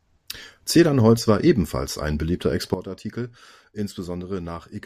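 At 2.74 s, after "war ebenfalls ein beliebter", a sudden gain jump drops speech and background noise together by about 12 dB in one step, not a fade, likely from an unramped gain change.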